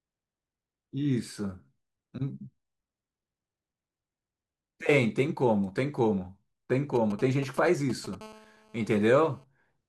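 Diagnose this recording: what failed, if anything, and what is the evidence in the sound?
From 6.96 to 8.15 s, galloping ticks and brief, fairly loud 217 Hz buzzes cut through the speech. These are GSM signalling bursts from a nearby 2G phone, rectified in the analogue wiring.

From 8.21 to 9.44 s, a steady, raspy 217 Hz buzz sits about 26 dB below the speech. This is GSM phone buzz from an active call's transmission, rectified by the analogue circuitry.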